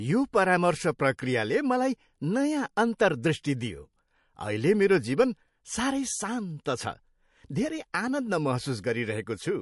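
The clip is speech, and MP3 compression damage runs through the whole of it. Nothing comes through above 11.3 kHz. The treble simply stops there, as an encoder does when bits are scarce. The damage is plainly audible. Quiet spectral detail flickers in and out between frames, giving a watery, swirling texture. S sounds turn metallic and chirpy. Consonant onsets smear. This points to a low-bitrate encode, likely around 48 kbps MP3.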